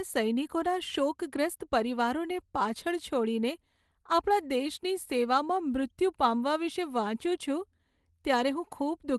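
Nothing stood out when listening to this speech recording.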